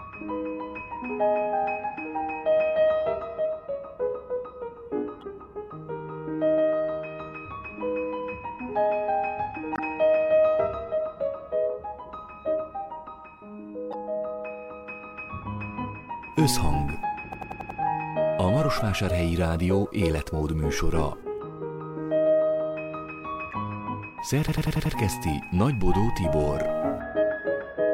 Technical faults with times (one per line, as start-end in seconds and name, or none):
5.21-5.23 damaged data in a compressed stream
9.73-9.79 damaged data in a compressed stream
13.91-13.94 damaged data in a compressed stream
17.33-17.80 system hang loop
23.51-23.53 damaged data in a compressed stream
24.48-24.95 system hang loop